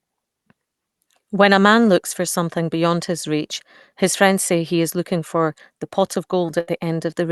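A burst of packet loss hits the speech from 6.60 to 6.69 s, just after "for the pot of". About 70 ms of audio never arrived in time to play, so the receiver carried the last sound forward and faded it down. That leaves a brief held buzz or fading hiss where speech should be. When playback resumes, the stretch in between is gone. The Opus call path limits the top end to around 12 kHz.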